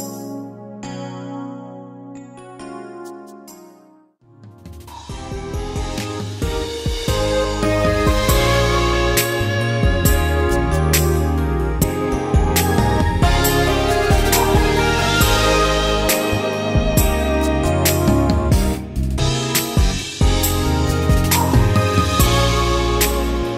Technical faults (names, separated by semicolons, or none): damaged data in a compressed stream